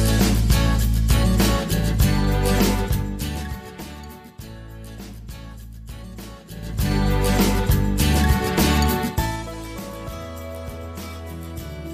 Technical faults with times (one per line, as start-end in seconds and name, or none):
2.69-3.94 zipper noise
6.43-6.95 zipper noise